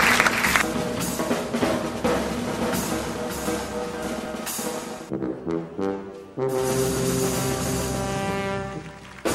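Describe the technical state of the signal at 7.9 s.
At 7.9 s the signal is intact, with no audible fault at that moment.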